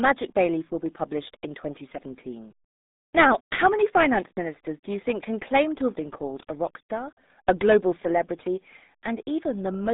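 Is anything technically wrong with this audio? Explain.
Yes. Throughout, the speech sounds muffled, boxed-in and gargly, with nothing above about 3.8 kHz and a band of roughly 200 Hz to 3.7 kHz. This is RealAudio 14.4 codec damage, consistent with heavy coding at about 8 kbit/s.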